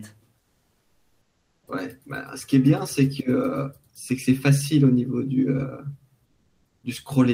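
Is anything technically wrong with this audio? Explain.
Yes. Comfort noise in place of the background appears from 0.39 to 1.67 s and from 6.25 to 6.83 s. The real background becomes steady, featureless hiss, about 5 dB and about 2 dB quieter, likely from Opus discontinuous transmission. Unlike a noise gate, these gaps are filled with noise rather than silence.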